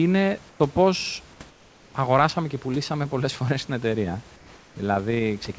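Speech, with comfort noise in place of the background at 0.50–0.60 s, 1.50–1.94 s and 4.36–4.76 s: the room's textured noise turns to a steady, featureless hiss about 2 to 4 dB quieter, likely from discontinuous transmission. Unlike a gate or dropout, the pause never goes silent.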